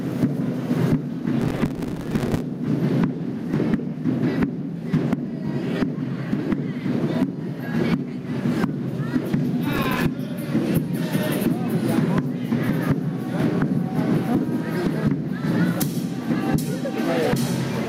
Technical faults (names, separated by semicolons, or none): gain pumping; processor overload crackle